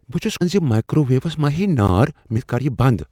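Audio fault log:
0.40 s and 2.37 s, damaged data in a compressed stream: Two brief glitches, each under 20 ms, break into the speech, the first right after "بہٕ چھس" and the second later in the clip. Each comes from a stretch of corrupted bytes in the compressed stream. The decoder misreads those frames and puts out garbled sound instead of the real signal until it finds a valid frame header again and resumes normal decoding.
0.86 s and 1.88 s, gap between chunks: Two short holes of about 12 ms each cut through the speech, the first just before "ویوس ما". They are spaced about one second apart, which fits audio delivered in 1-second chunks with silence inserted at each join. No sound is missing. The flow simply stops at each boundary and then resumes.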